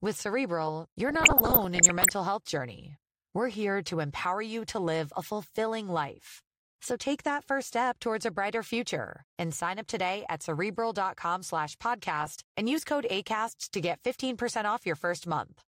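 From about 1.09 s to 2.10 s the speech picks up classic DAB burbling over the programme. Weak reception let bit errors, which sound like a rate somewhere under one percent, slip through the error correction into the MP2 data. Corrupted samples then put short blips of noise into single sub-bands, and corrupted scale factors make sub-bands jump in level for up to a frame, across dozens of frames in that second.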